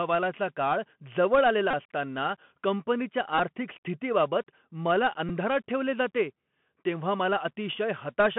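The Bluetooth CVSD headset codec shapes the whole speech clip. The band runs from roughly 150 Hz to 3.4 kHz, consistent with 64 kbps one-bit delta coding whose adaptive step lags loud high content. Sibilants turn scratchy, and a granular hiss sits under the speech.

A Bluetooth headset packet repeated fault occurs at 1.71 to 1.74 s, about 26 ms, which fits a run of seven lost packets each replaced by the previous packet's bits, giving a brief buzz near 267 Hz. Shorter repeats at 3.38 s and 5.29 s, about 11 ms each, sound as brief buzzes near 267 Hz.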